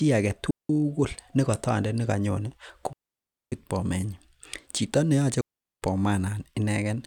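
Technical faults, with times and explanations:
0.31 s, repeated buffer: a tiny click as a slice of about 1.3 ms plays twice with hard joins, which fits a 64-sample buffer replayed when fresh audio arrived late.
0.51 to 0.69 s, 2.93 to 3.52 s and 5.41 to 5.82 s, digital wireless dropout: clean near-silent holes of about 190, 590 and 410 ms with no noise burst, as the receiver briefly fades to mute after losing too much data.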